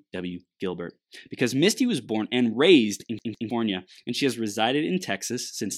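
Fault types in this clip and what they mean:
CD stuck on one turn: a scratch sends the laser back one track, so a 0.16 s slice of speech repeats twice from 3.19 s with brief mutes, unlike slower, uneven buffer stalls.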